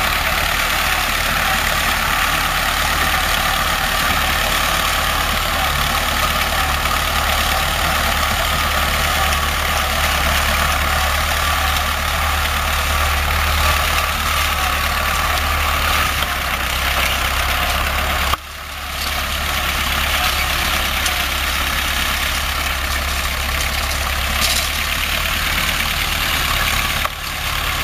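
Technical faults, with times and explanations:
Throughout: imaging from sample-and-hold upsampling. Each sample appears simply held until the next, which fits audio raised from a 16 kHz rate with no smoothing filter. The spectrum is mirrored above 8 kHz, filling 8 to 16 kHz at about 12 dB below the signal and adding a bright metallic fizz that rises and falls with the sound. A spectrogram shows that band as a reflected copy whose lines slope opposite to the real ones, and the zoomed waveform shows small staircase steps.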